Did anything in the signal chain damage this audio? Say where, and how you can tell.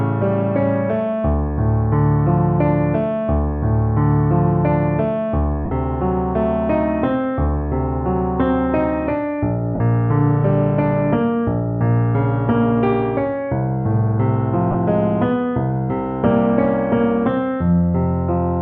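Yes. Brief noisy smears replace the sound at 5.65–5.72 s (60 ms), 9.75–9.80 s (52.5 ms) and 14.71–14.75 s (30 ms). These are lost LE Audio frames on the Bluetooth link, fitting 7.5 ms frames. The LC3 decoder filled each gap by replaying the last spectrum with randomised signs.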